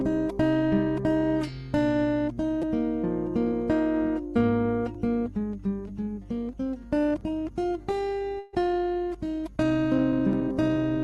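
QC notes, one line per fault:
2.62 s, repeated buffer. A single short piece of about 5.8 ms plays three extra times in a row, which fits a 256-sample buffer. New audio arrived late, so the device looped the last block it had. Each repeat meets the next with a hard join. The loop is so short that it comes across as a quick click or brief buzz rather than an audible stutter. Essentially nothing is lost.
8.39 to 8.55 s, burst of packet loss. About 140 ms of audio never arrived in time. The receiver filled roughly 132 ms by stretching the last sound it had and letting it fade, so the gap never drops to silence. Instead, a held, dimming tail replaces the real sound. Playback then picks up further along, and the stretch in between is missing.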